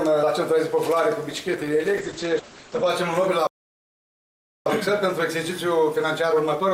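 A call bitrate drop runs from 1.3 to 2.95 s. The encoder falls from 96 kbps to 10 kbps and stays at the bottom for about 1.58 s, so the audio turns coarse and watery. Its bandwidth also narrows from 20 kHz to 8 kHz, which dulls the top end until the rate recovers. A playback stall then cuts the audio to silence from 3.47 to 4.66 s, a gap of about 1.19 s. The likely cause is the player running out of buffered data or its output thread being blocked. From 4.66 s to the end comes time-compressed catch-up, where the player clears its backlog by cutting and cross-fading short pieces. Playback is hurried at about 1.1 times normal speed with the pitch unchanged.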